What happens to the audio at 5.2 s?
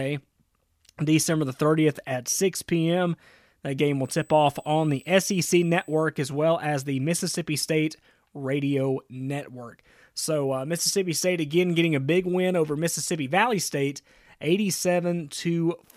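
At 5.2 s a USB whine is present, running from 4.04 to 6.04 s as a steady, faint 8 kHz tone roughly 35 dB below the speech. It comes from the bus's 125-microsecond microframe current draw leaking into the audio ground. On a spectrogram it appears as a thin horizontal line at 8 kHz across those two seconds.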